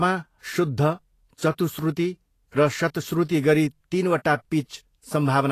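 Across the whole speech clip the treble is grainy and hissy. Nothing is present above about 14.2 kHz, and the top octave that remains sounds rough rather than clean. Consonant onsets are softened and smeared. The likely cause is Vorbis compression at a low setting, which fits a bitrate near 34 kbps. The encoder kept only a smooth outline of the upper spectrum. It then quantised the detail so coarsely that it came back as noise.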